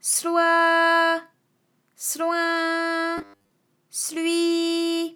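Robotic sound from repeated short buffers appears from 3.18 to 3.50 s in this audio clip. Over that third of a second the sound turns into a rigid, metallic buzz at a fixed 100 Hz, and most of the stretch is repetition rather than new material. The likely cause is audio arriving too seldom, with the software looping the last 10 ms or so to fill the gap. That repeat length fits the 100 Hz buzz, while the skipped audio is lost.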